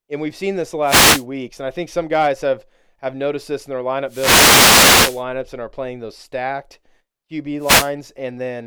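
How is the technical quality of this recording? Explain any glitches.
The recording is marred by three bursts of static, each a wireless microphone noise hit: from 0.84 to 1.25 s, from 4.07 to 5.24 s (the longest, just over a second), and from 7.59 to 7.92 s. Each one swishes in as a hiss that thickens. The analogue FM radio link is fading as reflected signals cancel at the receiver, letting its noise rise over the weakened carrier.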